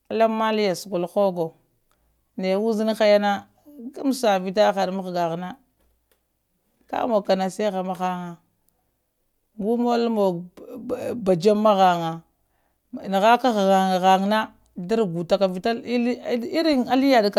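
No technical faults can be heard in this recording.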